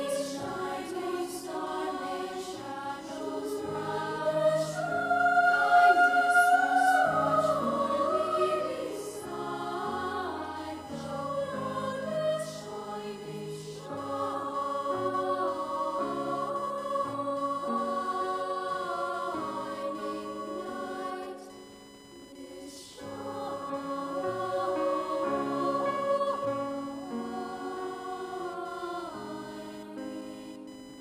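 Computer activity noise runs through the whole clip: a buzzy, chirping whine pulsing at around 1 kHz, roughly 25 dB below the sound. Shifting processor or graphics load disturbs the shared audio ground, so unlike steady mains hum, it changes with the computer's activity, not the sound.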